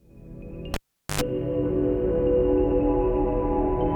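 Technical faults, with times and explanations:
0.74 to 1.21 s, cable pulled and plugged in: a live lead was yanked out and reinserted, giving a pop, about 0.42 s of near silence, then roughly 94 ms of 50 Hz mains buzz while only the plug tip made contact, and a second pop as the signal returned.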